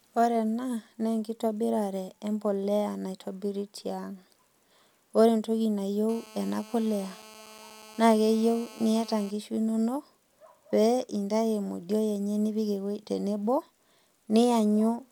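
A hard, raspy buzz sits under the speech from 6.09 s to 9.31 s, nearly steady, pitched at about 217 Hz with a dense stack of harmonics and about 22 dB below the speech. This is GSM phone buzz: a nearby 2G phone in a call transmits bursts at 216.7 per second, and the audio circuitry rectifies those radio pulses into an audible tone that has nothing to do with the speech itself.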